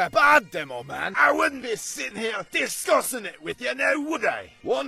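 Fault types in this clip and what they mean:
Adaptive stream at a lower bitrate: the stream switched to a lower-bitrate version at 0.89 s, abruptly removing content above 12.4 kHz, with no gap in playback.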